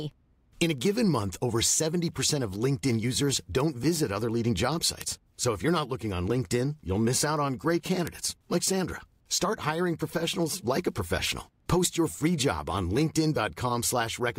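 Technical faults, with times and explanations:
0.31 to 14.19 s, word clock ticks: Ticks recur through the speech at a steady rate, roughly five per second, about seventy of them. The receiving device runs on its own clock, off by roughly 100 ppm. Each slip drops or repeats one sample.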